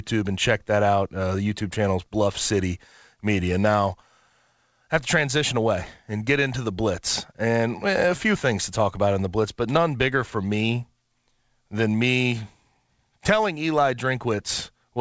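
No technical faults are audible.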